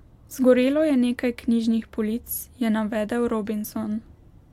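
Nothing in this bit of speech stands out as a technical problem; there's just the recording, with no glitches, dropouts or odd artefacts to point to.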